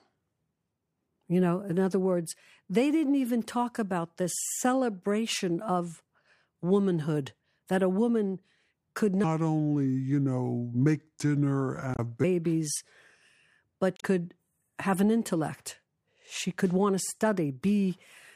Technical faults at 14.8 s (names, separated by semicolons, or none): none